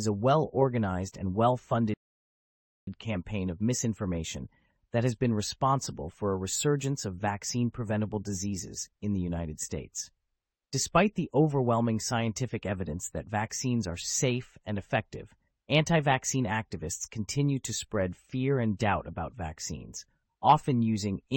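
At 1.94 s, right after "well organized and well", there's a rebuffering stall: the player ran dry, went silent for about 0.93 s, then picked up cleanly at "campaign of misinformation that".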